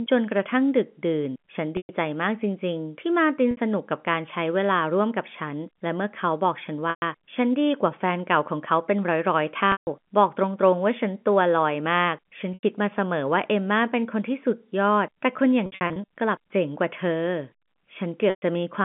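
Packet loss with pitch repetition occurs at 1.77, 3.51, 6.90, 9.72, 12.54, 15.66 and 18.30 s. Each gap lasts 60 to 150 ms, except at 15.66 s, where losses scatter over 420 ms. The receiver loops the last pitch period, producing a held, buzzy tone that fades on longer gaps before speech cross-fades back, all within the 150 Hz to 3.4 kHz telephone band.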